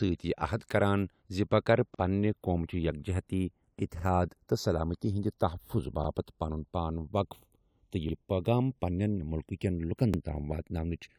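From the start, the speech has channels drifting apart: the two sides run on slightly mismatched clocks, sliding to about half a millisecond apart, so in mono you get a slow flanging sweep. Then there are overlapping chunks at 1.95 s (right after "زِ بہٕ کرٕ"), 3.99, 6.04, 8.09 and 10.14 s. Each new 2-second chunk starts about 48 ms early, so that bit plays twice and you hear a brief stutter.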